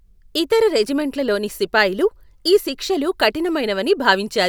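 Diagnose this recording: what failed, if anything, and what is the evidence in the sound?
Nothing stood out on listening to this speech recording that would point to a failure at any stage of the chain.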